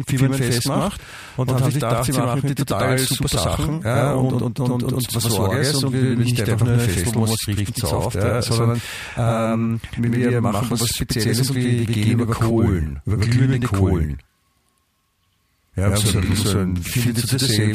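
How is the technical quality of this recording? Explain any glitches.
The recording has one problem running through the whole thing, and it's a clear one. Channel delay (doubling): from start to finish, one channel sits about 93 ms behind the other, which fits a 4096-sample buffer. Once they're summed to mono, that late copy comes through at full level as a distinct slap echo, so every syllable of the speech sounds doubled.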